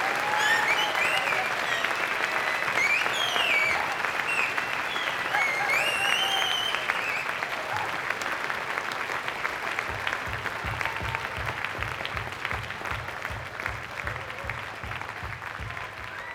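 No technical faults can be heard anywhere in this recording of sounds. There is nothing to point to at any moment.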